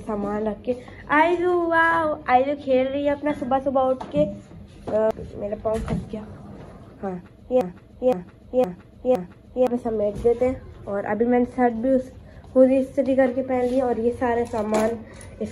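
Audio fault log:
7.61–9.67 s, broken-record loop: a fragment about 0.51 s long plays four times back to back, so the sound stutters in a fixed rhythm. Whatever should have played across those two seconds never arrives. The cause is likely a stalled player or stream resending the last piece it held. On a waveform the same envelope shape repeats four times identically, and a spectrogram shows one block of pattern tiled side by side with hard seams at each restart.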